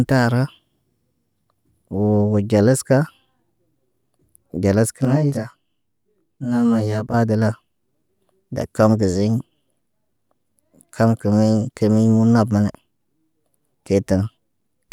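From 5.05 to 7.14 s the speech turns rough and slightly doubled from channel delay (comb filtering). One channel lags the other by around 20 ms, so summing to mono cancels shared content at regularly spaced frequencies, starting very low, near 20 Hz.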